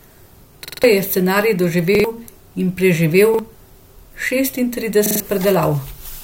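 Repeated buffer stutters at 0.65–0.84, 1.95–2.04, 3.34–3.39 and 5.06–5.20 s. Late audio forced replays of one 46 ms block, visible as identical tiled slices with hard vertical seams.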